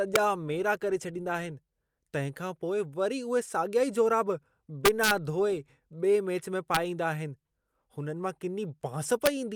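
Integer overflow: loud speech peaks, pushed about 1 to 2 dB past the integer limit, wrap to the opposite sign instead of being limited. This causes violent cracks at 0.16 s, from 4.85 to 5.11 s after "साॻिया ई जोराब", at 6.75 s and at 9.26 s.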